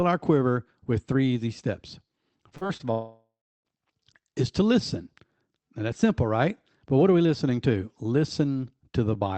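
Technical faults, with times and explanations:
2.49–2.81 s, repeated packet loss (robotic sound): four short holes, the longest about 40 ms, with roughly a third of this stretch patched by stretching the previous sound. Holes coming back-to-back like that give a choppy, robotic texture with bits of speech missing.
2.91–3.67 s, long network dropout: about 0.74 s of audio never turned up. You hear the last sound dragged on as a fading buzz or hiss, then about a third of a second of near silence before speech resumes further on, minus the lost part. Likely cause is a stall in the network connection.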